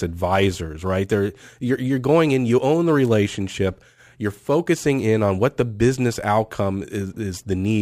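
Throughout, crude rate conversion, which fits 48 kHz to 44.1 kHz by nearest-sample picking, adds gritty inharmonic fizz about 30 dB under the speech.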